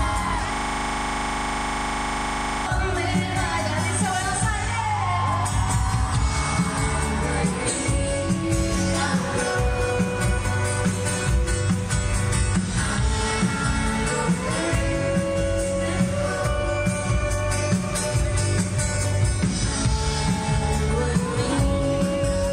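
From 0.54 to 2.66 s there's a system hang loop: the machine or driver froze while the audio hardware kept replaying one 40 ms slice of its buffer. That exact chunk repeats at 25 Hz, giving a rough, rattling buzz for about two seconds.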